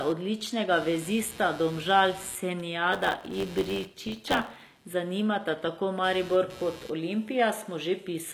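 Computer activity noise runs under the speech for the whole clip. It is a buzzing, chirping layer pulsing at around 150 Hz, sitting roughly 25 dB below the speech. It rises and falls independently of the talker, following load changes in the processor, graphics card or mouse that push current through the ground shared with the audio circuit. The result is interference riding on the signal reference rather than anything picked up acoustically.

Throughout, the treble has a gritty, metallic edge, and s sounds come across lispy and synthetic. This pattern is likely HE-AAC compression at a bitrate around 24 kbps. The codec keeps only the lower spectrum and rebuilds the top by copying lower bands upward under a coarse envelope, so the upper harmonics no longer line up with the real ones.

From 2.91 s to 4.84 s, a block size mismatch (truncated) adds a steady buzz at 91.9 Hz, and the speech runs 1.07 times fast while keeping roughly its normal pitch. 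One stage writes longer blocks than the next reads, which fits 512-sample blocks being written. The tail of each block is discarded, and that periodic cut produces the buzz at the block rate.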